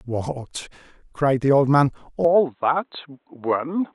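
In this speech recording, the input likely switched to a poorer device at 2.25 s, with no gap. From there to the end, nothing passes above 4.1 kHz and a faint new noise floor sits roughly 50 dB down, so the sound turns dull and boxy.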